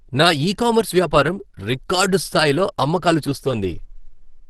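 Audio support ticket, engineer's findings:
Opus compression, whole clip, 0 s to end. Speech sounds muffled, hoarse and grainy, with plainly audible codec damage. Nothing above 12.1 kHz, a super-wideband ceiling. Sound points to a low bitrate near 16 kbps in hybrid mode, likely the speech-oriented layer coding the lower band while sparse band energies fill the top, producing roughness, not holes.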